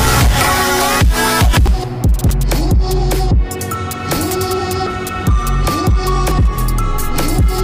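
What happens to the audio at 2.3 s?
At 2.30 s the program likely failed to collect its samples before the hardware overwrote them, a dropped buffer (overrun). About 150 ms of audio is lost and the two sides are spliced directly, giving an abrupt jump forward and no gap of silence.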